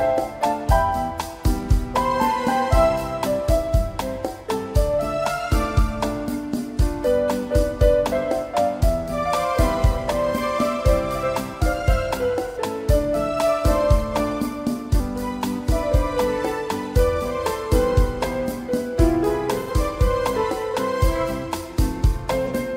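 At 12.47 to 12.57 s, 19.59 to 19.70 s and 22.45 to 22.51 s, AAC frame loss with concealment: the decoder patches about 85, 85 and 43 ms gaps from the last good spectrum, fitting two, two and one lost frames. The result is a smeared, noisy patch rather than a hard dropout to silence.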